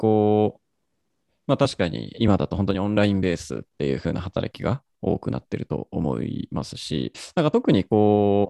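From 2.71 to 2.97 s, a sudden gain jump cuts the speech by about 6 dB, likely an unramped gain change, seen as an abrupt waveform step.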